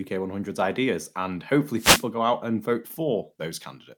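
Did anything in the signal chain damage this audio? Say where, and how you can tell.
Yes, a wireless microphone noise hit in the analogue radio link, 1.74–2.09 s, before "go out and vote": the FM signal fades, leaving a broadband static smear on the spectrogram.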